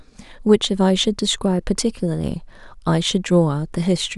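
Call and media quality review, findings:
No technical faults were found in the speech signal across the reviewed clip.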